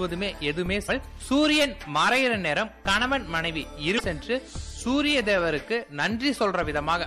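MP3 compression runs through the whole clip, and the damage is plainly audible: faint detail flickers in and out, giving a watery, swirly texture with smeared attacks. The likely cause is an encoder starved of bits, which fits a low bitrate around 64 kbps. Damaged data in the compressed stream breaks through twice, at 0.85 to 0.89 s and 3.96 to 4.01 s, each a brief glitch about 40 to 50 ms long, where the decoder misreads corrupted frames and resynchronises on the next valid one.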